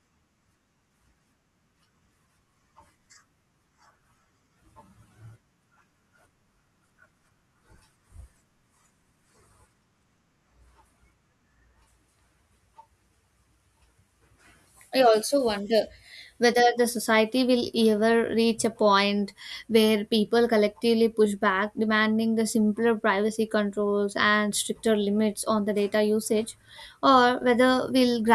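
Nothing technical goes wrong anywhere in this bit of speech, so there's nothing here to point at or explain.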